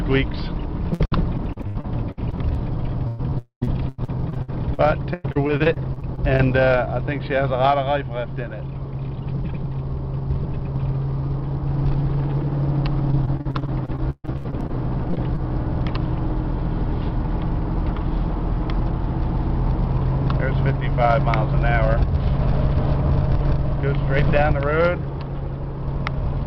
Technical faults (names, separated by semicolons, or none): repeated packet loss (robotic sound); long network dropout